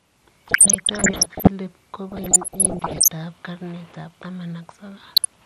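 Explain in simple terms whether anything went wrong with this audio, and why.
Throughout the speech there is a dull, plainly gurgly, grainy quality, most likely from MP2 compression: the treble is thinned and the remaining sound is stored roughly. It stays steady from start to finish, which separates it from the bursts below.

DAB burbling appears from 0.46 to 1.47 s, 2.09 to 3.10 s, and briefly 5.14 to 5.26 s: bubbling, squelchy chirps over the speech. Reception errors corrupted parts of the signal, so short blips of noise pop up in narrow slices of sound. It comes and goes, unlike the constant dullness.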